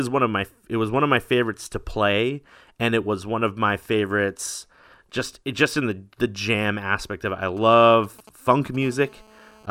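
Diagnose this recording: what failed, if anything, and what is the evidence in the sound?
A nearby 2G handset's radio pulses are being rectified in the analogue wiring and input circuitry. From 7.57 to 8.76 s, GSM signalling bursts appear: short clusters of transmission, as a phone does while negotiating with the network. They are heard as a galloping dit-dit-dit of short 217 Hz buzzes, at the handset's burst rate, sitting roughly 20 dB below the speech and unrelated to it.

From 8.82 to 9.66 s, the same analogue path picks up GSM phone buzz as the handset moves into a call and transmits in steady bursts. Each 217 Hz transmit pulse is demodulated into the audio, giving a steady, hard, raspy buzz rich in harmonics, about 28 dB below the speech. The shift from broken clusters to an unbroken buzz marks the change from signalling to an active call.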